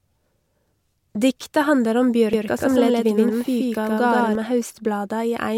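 Right after "handlar om", at 2.33 s, a doubled audio track starts abruptly and runs to 4.35 s. A second full-band copy trails about 150 ms behind at roughly equal level. It has no room colour. A slower parallel capture path is the likely cause.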